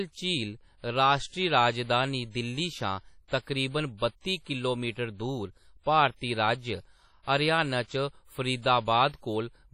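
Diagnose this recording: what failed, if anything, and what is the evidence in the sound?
The speech sounds washy and ringing throughout. Hiss swells and fades with the signal. Nothing is heard above 15.8 kHz, and the damage is heavy. This points to the codec stage, likely WMA compression at a low bitrate near 32 kbps. Long transform blocks spread quantisation noise, and weak lines are zeroed.

Pre-echo occurs at 3.28 to 3.32 s, after "राजधानी दिल्ली शा" and before "तकरीबन बत्ती किलोमीटर दूर". A short hiss runs about 41 ms ahead of a sharp attack, and the attack sounds smeared. This is also the codec stage. Noise sized for the loud onset fills the quiet start of that block.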